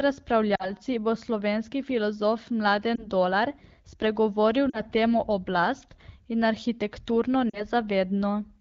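Lost AMR speech frames at 0.55 s (before "bo slovenski filozof"), 2.95 s (after it), 4.70 s and 7.50 s. Each dropout lasts about 20 to 40 ms, and the decoder bridges it by repeating the previous speech parameters at falling gain. The result is a brief dip or warble at 2.95 s and a drop to near silence at the others before the AMR-WB speech returns weak or rough for a moment.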